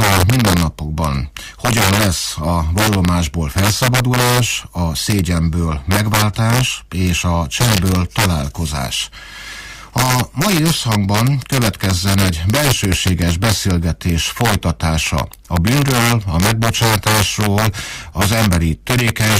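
Integer overflow runs throughout the clip: the signal is pushed about 2 dB past the integer ceiling, and instead of being limited, those peaks wrap around to the opposite extreme. Under one percent of samples cross over, so loud moments erupt into sharp, violent cracks far harsher than clipping.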